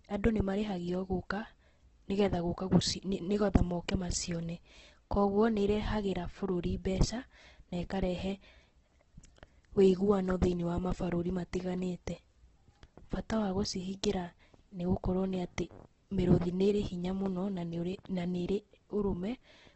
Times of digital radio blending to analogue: none

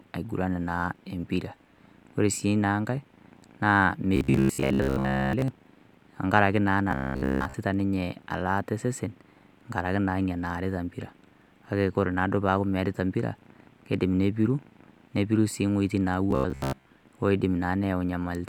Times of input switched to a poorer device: none

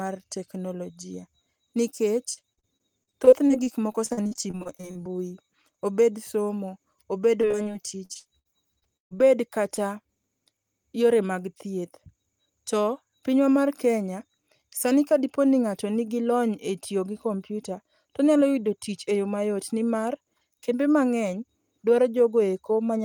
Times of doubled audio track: none

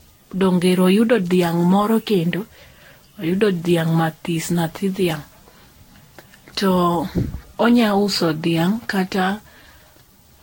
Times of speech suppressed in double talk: none

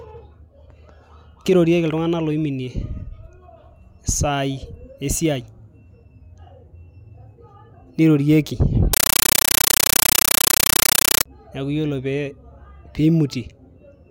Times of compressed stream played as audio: 8.93-11.26

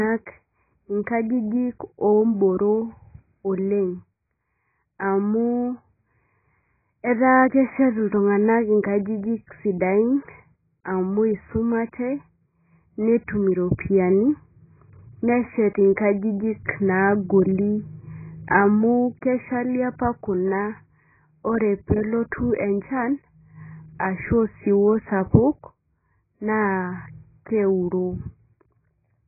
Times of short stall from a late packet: none

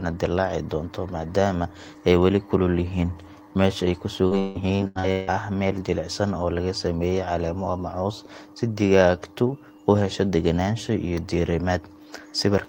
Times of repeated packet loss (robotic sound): 4.27-5.30

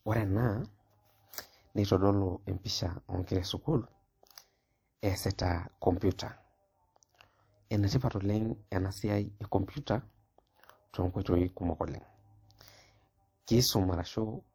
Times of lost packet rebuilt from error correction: none

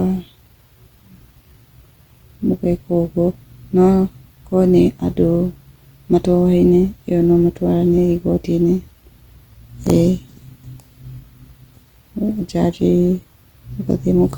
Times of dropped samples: none

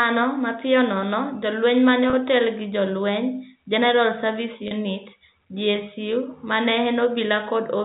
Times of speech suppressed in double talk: none

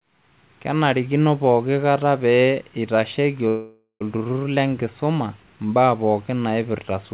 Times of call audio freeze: 3.48-4.03

